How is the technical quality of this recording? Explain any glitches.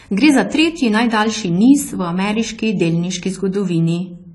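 The recording carries audible AAC compression damage from start to finish. Nothing reaches above about 11.5 kHz, and the sibilants of the speech have a smeared, warbling, fizzy texture with a dull overall tone. The likely cause is AAC-LC coding at a low bitrate, something near 32 kbps. To save bits, the encoder has dropped the top band and quantised the remaining frequency lines coarsely, so the detail in between shimmers rather than simply being muffled. A plain low-pass filter would sound clean and dull, without that shimmer.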